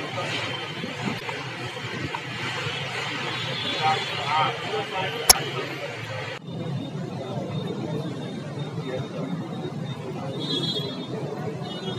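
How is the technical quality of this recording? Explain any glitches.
Two short glitches at 1.16 to 1.22 s and 5.27 to 5.35 s come from damaged data in a compressed stream. The decoder misreads corrupted frames and resyncs.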